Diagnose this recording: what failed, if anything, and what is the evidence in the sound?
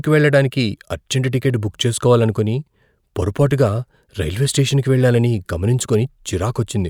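Nothing failed: there is no audible evidence of a defect at any stage of this speech recording.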